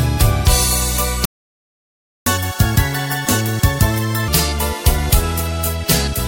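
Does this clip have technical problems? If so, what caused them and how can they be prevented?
Yes. A playback stall runs from 1.25 to 2.26 s: the sound cuts off mid-flow and the output stays silent for about 1.0 s before resuming. The likely cause is the player running out of buffered data, or its output thread being blocked, so nothing reached the device until it recovered. Keeping a deeper playback buffer and running the audio thread at high priority, free of blocking work, would prevent it.

Catch-up at higher speed follows directly, from 2.26 to 4.28 s. Having fallen a second behind, the player resamples its backlog and plays it at 1.5 times normal speed, which raises the pitch by about seven semitones and gives a hurried, chipmunk-like quality for roughly two seconds before dropping back to normal. Recovering lost time by dropping or skipping audio, or by time-stretching without changing pitch, would avoid the audible pitch rise.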